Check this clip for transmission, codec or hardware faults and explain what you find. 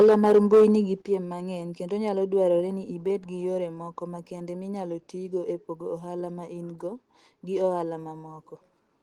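Two kinds of fault are audible, both on the capture side.

From 0.00 to 0.66 s the opening speech has a harsh, crackling edge on its loudest syllables. This is microphone overload, likely from the input volume being set too high. The peaks run about 5 dB past the converter's ceiling, so their tops are flattened and a sizeable share of samples in that stretch are clipped, turning smooth waveforms into squared-off distortion.

The microphone volume is then stepped down three times: at 0.02 s by about 2 dB, at 1.02 s by about 6 dB, and at 3.06 s by about 2 dB. Each is an abrupt level drop affecting the voice and background together. This likely comes from the call software's gain control reacting to the overloaded input and cutting the device's input volume in single steps. The 6 dB step at 1.02 s is the largest.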